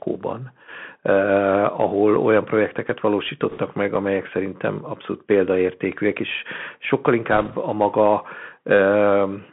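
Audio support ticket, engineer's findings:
Bluetooth CVSD headset codec, full length. Narrowband speech, nothing below about 150 Hz or above 3.4 kHz; s sounds scratchy, loud high-energy syllables smeared and distorted, granular hiss under the speech. Probable component: headset link using CVSD, consistent with a 64 kbit/s one-bit delta stream whose adaptive step can't keep up with fast, loud slopes. Spectrogram: hard ceiling near 3.4 kHz, empty above; low-level noise floor filling gaps between phrases. Waveform: slope-limited, slightly jagged peaks.

Bit errors on a Bluetooth voice link, 3.50–3.59 s after "olyan projekteket", before "meg amelyek szerintem abszolút"; 7.32–7.55 s after "abszolút példaértékűek és sokkal", before "a maga". Rushing, crackly noise over the speech, no sharp clicks. Mechanism: flipped bits in the CVSD stream at a rate of a few percent. Each bit nudges the signal only a small step and the error decays, so damage spreads as noise rather than spikes. 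Spectrogram: broadband speckle across the passband for those spans. Waveform: fuzzy, thickened trace, no isolated spikes.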